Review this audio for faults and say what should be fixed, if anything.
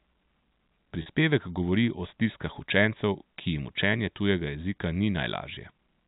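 Packet loss with pitch repetition occurs at 1.02 to 1.06 s: about 40 ms of the speech is missing, which fits two lost 20 ms packets. The receiver bridges the gap by repeating the last pitch period, so the sound briefly holds with a slightly buzzy quality before the speech resumes. The narrowband G.711 telephone coding underneath is audible as the expected 4 kHz ceiling. To prevent this, use a larger jitter buffer or forward error correction on the network path.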